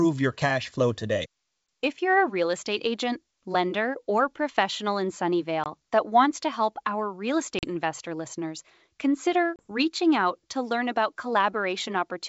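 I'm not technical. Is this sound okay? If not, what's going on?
No. This is packet loss on an ADPCM call: small chunks of the call never arrived, a few packets each time, and the receiving end filled the gaps with silence and briefly lost track of the speech. You hear short, sharp dropouts, then the voice comes back slightly distorted before settling. They fall after "lender or professional in" at 5.64 s, after "to help our real" at 7.59 s, and after "investor listeners consider" at 9.56 s.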